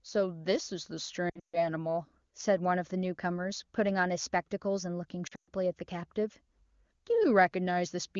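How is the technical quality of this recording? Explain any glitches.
Two glitches stand out, both lost AMR speech frames: at 1.29–1.69 s and at 5.27–5.49 s, the sound drops to near silence within two frames, then returns weak or rough. Radio errors corrupted the frames, so the wideband decoder kept repeating the last good pitch and vocal-tract settings at falling gain. The longest runs are about 140 ms and 120 ms. Unlike a hard network dropout, the sound fades out rather than cutting off. The wideband codec itself is clean, consistent with its top rate.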